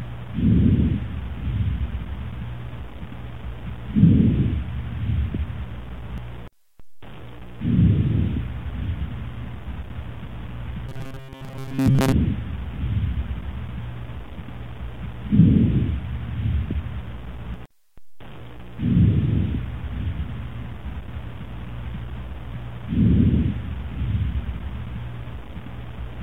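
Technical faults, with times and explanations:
10.89 to 12.12 s, robotic sound from repeated short buffers: the sound turns into a stiff metallic buzz locked at 134 Hz, likely because audio arrived too slowly and a roughly 7.5 ms chunk kept replaying, skipping most of the real signal meanwhile.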